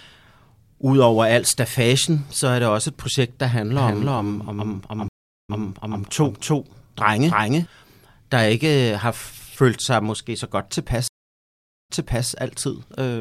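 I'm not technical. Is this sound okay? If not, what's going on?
No. Most likely a second, slower recording path or a misaligned edit mixed the speech in twice. From 3.78 to 7.66 s, a second copy at about the same loudness trails roughly a third of a second behind. This doubled audio track sounds like a flat echo that starts and stops abruptly.

The connection also dropped twice. Each time, this stream reconnect left the player silent until it reconnected and restarted decoding. At 5.08 s there is 0.4 s of silence, and the speech then resumes 0.52 s earlier, repeating a moment. At 11.08 s there is 0.82 s of silence, and it resumes 0.39 s earlier.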